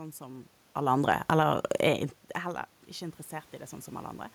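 From 0.88 s to 2.75 s, automatic gain rising sets in: after the input level drops by about 24 dB, the gain control slowly lifts its gain by about 3 dB. The speech and the room noise swell together across nearly two seconds, so the background climbs along with the voice.

Overlapping this, from 1.01 s to 1.5 s, automatic gain falling pulls the gain down by about 5 dB, reacting as though the input were too loud. The speech sinks briefly along with its background. This happens around the talker's natural shift in distance near 1.5 s.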